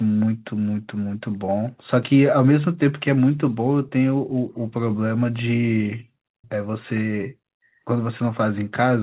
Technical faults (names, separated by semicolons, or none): echo leak